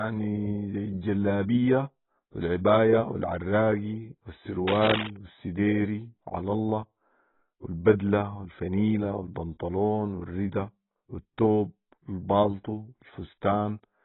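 Throughout the speech, nothing sits above 3.9 kHz, and the remaining band sounds dull, smeared and warbly, with fizzy sibilants. This is heavy AAC compression, likely AAC-LC at a bitrate around 16 kbps, where the encoder lowers its cut-off and starves bands of detail.

From 4.67 to 5.10 s, dense, uneven scratching and rustling bursts ride over the speech at nearly its own level. This is cable scratch noise, likely from a worn cable or connector being moved, rapidly changing contact resistance.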